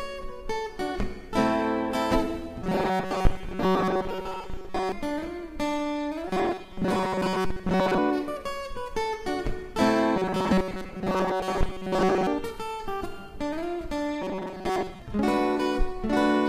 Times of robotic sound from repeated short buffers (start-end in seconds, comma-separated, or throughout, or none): 2.62-4.92, 6.28-7.99, 10.16-12.27, 14.22-15.02